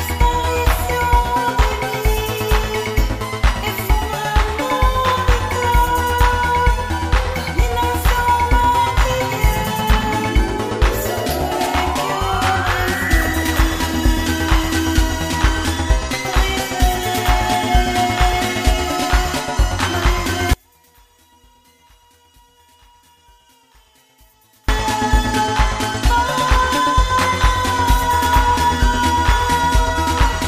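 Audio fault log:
20.53–24.69 s, one channel inverted. The sound falls by about 36 dB to a faint remnant. Likely one channel's polarity flipped, so shared content cancels when summed.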